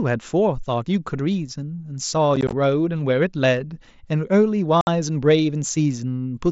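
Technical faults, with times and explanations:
2.36–2.53 s, unconcealed Bluetooth headset packet loss. About 60 ms of the speech is missing, scattered over 165 ms in short holes. The longest hole is 15 ms. This fits about eight lost packets of 7.5 ms each. Nothing fills the holes, so each edge is abrupt. The result is a brief crackle and a chopped voice.
4.81–4.87 s, unconcealed Bluetooth headset packet loss. Another 60 ms goes missing, packed into one near-solid dropout. The voice cuts out with hard edges and then returns. The mSBC wideband link carries the speech on either side.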